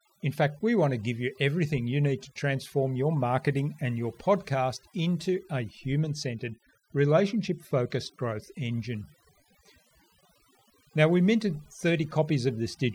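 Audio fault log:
Throughout: overdone noise removal. The denoiser's been pushed way too hard on this speech, so any frequency band sitting near its noise estimate gets dropped almost to nothing. Quiet bits of the voice vanish with it, leaving near-silent gaps with twinkly specks.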